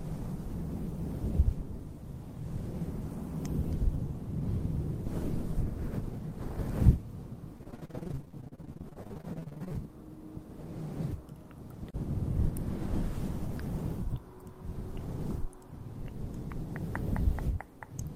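From about 7.57 to 9.76 s there's repeated packet loss, so it goes robotic and choppy. Dozens of short holes, the longest around 43 ms, get patched by stretching the previous sound, and roughly 40% of that stretch ends up as filler, hence the stutter.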